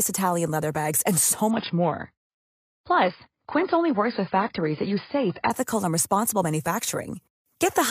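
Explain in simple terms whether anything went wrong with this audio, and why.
From 1.51 s, right after "leather bags and so", to 5.51 s, just before "and responsible", the stream drops to a lower bitrate: the connection slowed, so a smaller version played. The sound turns dull, with nothing above about 5.1 kHz, then abruptly recovers.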